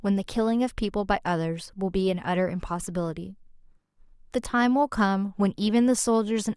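Nothing goes wrong anywhere in this bit of speech; there's no technical fault to point to at any moment.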